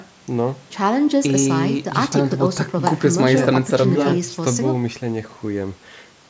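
No technical faults are audible.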